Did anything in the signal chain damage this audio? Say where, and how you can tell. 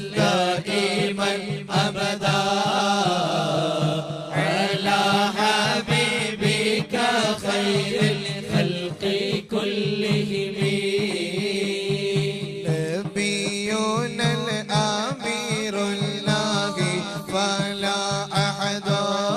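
No, no signal-chain damage heard.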